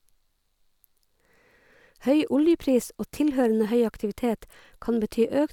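Nothing technically wrong turns up anywhere in this short speech recording, so there's no fault to point to here.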